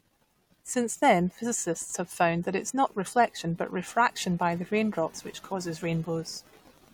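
Just after "not reflection but refraction", at 4.50 s, Wi-Fi interference starts and runs to the end. The audio circuit is rectifying a nearby Wi-Fi radio's beacon, sent every 102.4 ms. It ticks steadily about ten times a second, roughly 40 dB below the speech.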